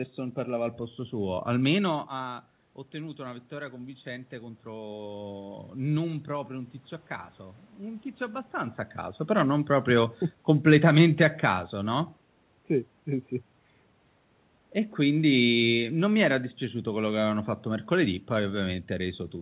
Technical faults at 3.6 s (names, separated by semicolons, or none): automatic gain rising